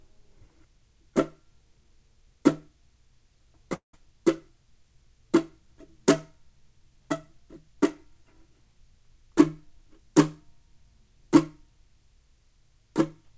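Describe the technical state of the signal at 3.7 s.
From 3.74 to 3.95 s the audio smears into a fading buzz, then silence; likely a long network dropout, with about 200 ms lost and concealed.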